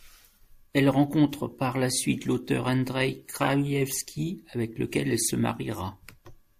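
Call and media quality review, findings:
Corrupt frame decoded, 3.42–3.48 s: short chirp-like burst in the speech, peaking around -15 dBFS, spanning about two codec frames. Decoder played bit-damaged frames with misread gains and codes. Energy sits at wrong frequencies, unlike a loss gap or concealment smear.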